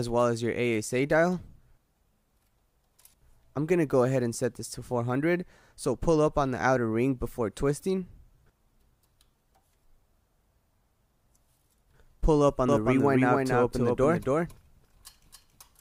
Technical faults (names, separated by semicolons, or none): doubled audio track